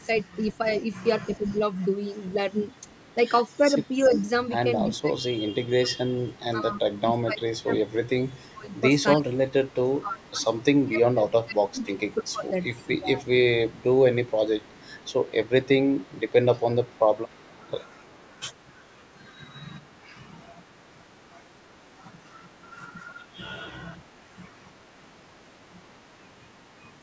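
Echo leak, from 0.0 to 5.0 s, 6.29 to 6.40 s, 7.58 to 9.37 s, 11.83 to 20.08 s and 26.58 to 26.98 s: a faint copy of the sound trails about 295 ms behind, likely from a loudspeaker echo slipping past the far end's canceller. Speech suppressed in double talk, at 1.38 to 1.61 s, 3.58 to 13.86 s and 24.17 to 24.83 s: the talker dips briefly, and deeply through the long middle stretch, likely because the canceller turned down its own talker together with the loudspeaker echo.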